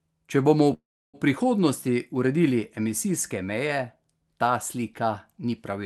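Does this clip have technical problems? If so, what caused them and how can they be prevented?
Yes. From 0.73 to 1.17 s there's a call audio freeze: the sound trails off into a fading fill, goes nearly silent, then resumes at "prihodnosti uredili emisijske meje" with nothing lost, just 0.4 s added. That's likely from delayed packets draining the jitter buffer. A steadier network or more jitter-buffer headroom would prevent it.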